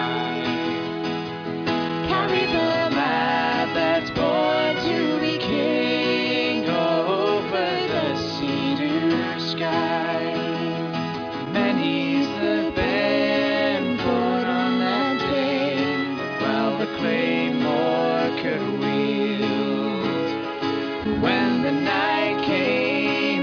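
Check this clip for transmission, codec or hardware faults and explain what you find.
No transmission or hardware faults were found here.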